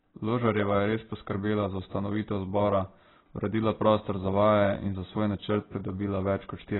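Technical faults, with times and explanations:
Throughout, AAC compression: the speech is dull and smeared, with nothing at all above 4 kHz, so sibilants lose their edge and turn into a fizzy smear, and the vowels carry a warble. That's likely heavy AAC-LC coding at a very low bitrate, something around 16 kbps. With so few bits, the encoder drops the top band entirely and coarsely quantises what's left, leaving spectral holes that shift from frame to frame.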